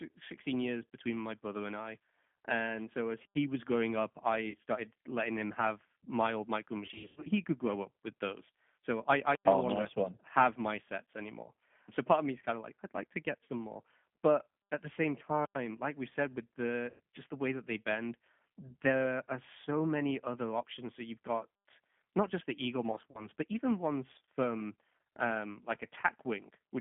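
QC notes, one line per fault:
Throughout, G.729 codec: the speech sounds rough, slightly synthetic and boxed in, held between 200 Hz and 3.4 kHz. Frames are rebuilt from a vocal tract filter, pitch predictor and sparse pulses, which fits an 8 kbit/s G.729A coder.
3.25, 9.35, 15.45, 21.55 s, gap between chunks: 100 ms holes recur every 6 s, one falling between "I I" and "no oh longer nice". Nothing is lost, but the audio was sent in chunks, leaving silence at each join.
4.50, 6.86–7.30, 13.44, 16.90, 22.91–23.27 s, VoIP packet loss concealed by the speech codec: the sound smears into a fading buzz or coloured noise, as after "was growing up I" (40 ms) and "like we've said with" (100 ms). The decoder extrapolates over lost packets, including 220 ms scattered across 400 ms at 6.86 s.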